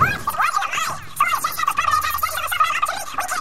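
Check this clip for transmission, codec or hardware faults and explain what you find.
One fault runs through the whole clip: a wrong sample rate. From start to finish everything plays at double speed and a full octave (12 semitones) high, which fits audio captured at 24 kHz being played out at 48 kHz with no rate conversion. Each sample lasts half as long as intended, so timing shrinks and every frequency doubles together. The sound comes across as shrill and rushed. On a spectrogram, all harmonic and formant bands sit at twice their natural height with spacing stretched accordingly, and the waveform shows events compressed to half their duration.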